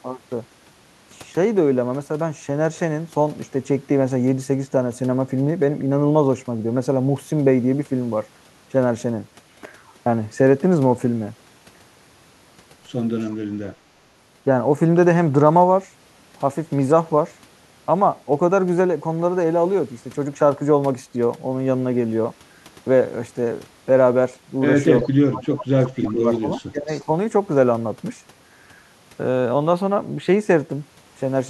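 At 13.21 to 13.27 s a brief echo leak appears: a very faint copy of the speech, trailing the original by 348 ms. The likely cause is a far end playing the call over a loudspeaker with an echo canceller that let a scrap of the microphone pickup through and back down the line.

From 25.01 to 26.48 s the speech is suppressed in double talk. The level sags by roughly 30 dB at its deepest while both sides are active. This is likely the echo canceller failing to tell the local talker from loudspeaker echo during overlap and attenuating everything. A second, shallower dip of around 20 dB follows at 26.69 to 26.9 s.

Interleaved with those dips, the echo leak returns at 26.34 to 26.61 s, now much more prominent, and again at 26.87 to 27.05 s, somewhat fainter. Both keep the same 348 ms delay, so the same leaking path is responsible.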